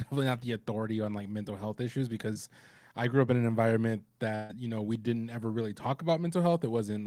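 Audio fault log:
2.33 to 2.37 s, short concealed packet loss: right after "like mental health issues" and just before "I grew up in", a sliver of the stream didn't arrive in time, so the receiver papered over it by stretching the last bit of audio for about 19 ms before easing back into the real signal. Roughly 20 ms of actual audio is gone, and what you hear is a quick smear or wobble rather than a clean gap.
4.35 to 4.51 s, burst of packet loss: a bigger hole this time, after "up in an environment" and leading into "you know we didn't". About 140 ms went missing in a row, and the concealer carried the last sound forward across the whole stretch, fading it as it went, so you get a held buzzy or hissy tail instead of silence. When the real audio picks up again, that 140 ms of content has simply been skipped.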